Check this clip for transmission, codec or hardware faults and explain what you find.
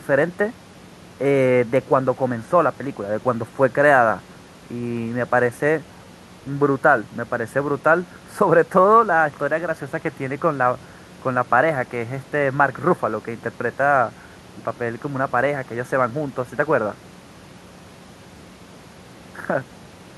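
No faults turn up anywhere in this speech.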